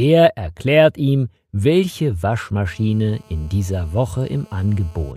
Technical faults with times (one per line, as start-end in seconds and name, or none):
2.65-5.12 GSM phone buzz